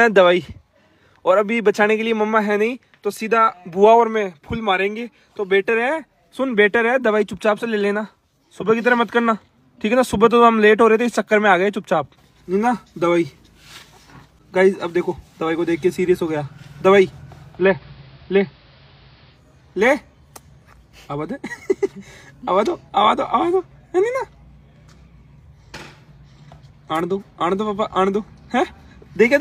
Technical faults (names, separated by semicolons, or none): digital radio blending to analogue